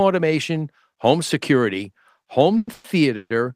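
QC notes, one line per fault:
2.57–2.68 s, 2.73–2.85 s and 3.16–3.31 s, call audio freeze: the sound stalls into a fading buzz for 100, 110 and 140 ms, dropping to silence at the tail of the first and last, then picks up where it stopped, so nothing's lost, just delayed. Likely packets held up, leaving the jitter buffer empty.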